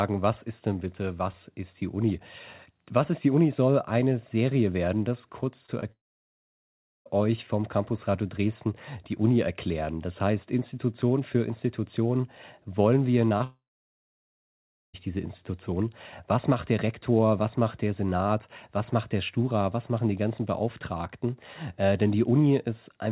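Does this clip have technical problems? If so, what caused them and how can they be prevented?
Yes. Right after "werden das kurz" at 5.66 s, and again at 5.80 s, 13.29 s and, just after "wollen wir", 13.39 s, there are brief smears or wobbles. These are short concealed packet losses: about 20 ms of audio arrived too late, and the receiver bridged each gap by extending the preceding sound before blending back. A steadier network path or a deeper jitter buffer would prevent them.

From 5.92 to 7.07 s, and again from 13.44 to 14.95 s just after "wollen wir", the sound breaks into a fading buzz and then about a second or more of silence before resuming with that stretch missing. The likely cause is a long network dropout: no audio reached the receiver, so after a brief stretch of extended sound it had nothing left to play. A more reliable connection, such as wired rather than congested wireless, would prevent this.

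The call path's narrow band, with nothing above 4 kHz, fits G.711 mu-law at 64 kbps and is not a fault.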